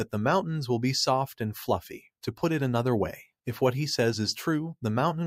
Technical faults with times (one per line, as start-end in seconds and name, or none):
none